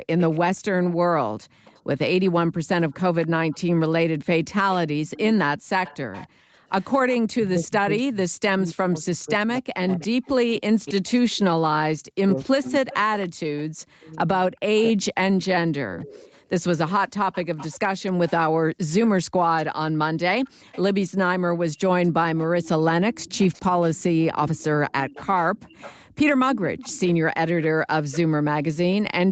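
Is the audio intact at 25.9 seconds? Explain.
No. At 25.9 seconds a faint, delayed second copy of the speech trails the original by about 0.28 s, sitting roughly 20 dB below it. This echo leak runs from 20.45 s to 28.19 s. It is likely caused by a far end playing the call over a loudspeaker, where the echo canceller failed to remove everything its microphone picked up and sent that residue back down the line.

At the same moment the room sound behind the speech drops away sharply, by up to about 40 dB, from 25.52 s until the end of the clip. This is background gated by the echo canceller. While the loudspeaker was active, the canceller pulled the microphone level down hard, so the ambience is pumped out rather than carried steadily.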